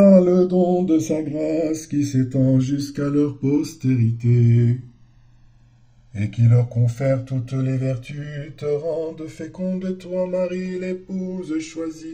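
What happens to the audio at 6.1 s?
At 6.1 s the channels are drifting apart, as they do for the whole clip. Left and right appear to come from devices running on separate clocks, off by something like a couple of hundred parts per million, so the delay between them keeps sliding, reaching around 2 ms by the end. Summed to mono, the comb-filter notches sweep slowly through the spectrum, heard as a slow flanging.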